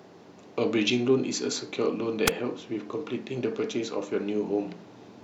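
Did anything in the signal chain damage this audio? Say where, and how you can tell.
Yes. A wireless microphone squelch dropout occurs at 2.26 to 2.31 s. The radio link faded briefly, hiss rose, and the receiver's squelch muted the output before speech returned.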